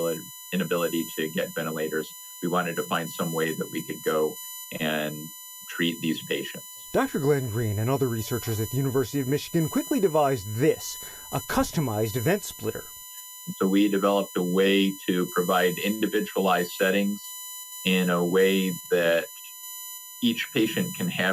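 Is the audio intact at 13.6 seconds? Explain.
No. At 13.6 seconds, as across the whole clip, USB whine is present: the USB bus polls in 1 ms frames, and the current pulses it draws leak into the audio path through shared power or ground. That lays a fixed-pitch whine on the sound, built on a 1 kHz fundamental with its harmonics, the strongest at 7 kHz, sitting roughly 15 dB below the wanted signal.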